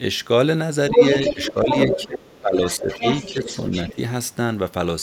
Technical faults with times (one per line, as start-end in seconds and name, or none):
0.90-3.95 other side's voice leaking through
0.91-1.00 speech suppressed in double talk
1.33-3.49 speech suppressed in double talk
3.92-3.97 speech suppressed in double talk